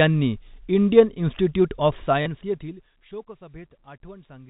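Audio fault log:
2.22–2.26 s, packet loss with last packet repeated: 40 ms refilled by replaying the previous chunk, fitting two 20 ms packets; waveform shows copied blocks.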